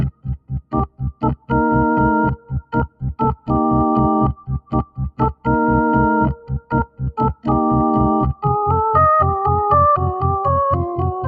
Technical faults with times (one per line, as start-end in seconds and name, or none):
0.00-11.28 noise suppressor applied to music or sounds
0.11-1.51 sound cut by the noise suppressor
2.36-3.03 sound cut by the noise suppressor
4.34-5.47 sound cut by the noise suppressor
6.35-7.02 sound cut by the noise suppressor